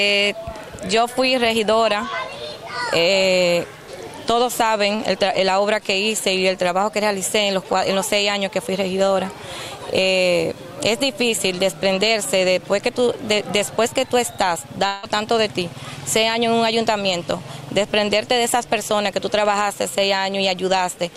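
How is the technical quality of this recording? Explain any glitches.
The recording has two network glitches.

At 4.95 to 5.02 s there is a short concealed packet loss. About 40 ms of audio arrived too late. The receiver filled roughly 32 ms by extending the preceding sound, then blended back. It is heard as a quick smear or wobble.

From 14.87 to 15.06 s the sound is replaced by a continuation of what came just before. It fades over about 160 ms. There is no silent gap. This is likely a long network dropout, where the receiver bridged the missing audio with a decaying buzz or hiss before the real signal resumed.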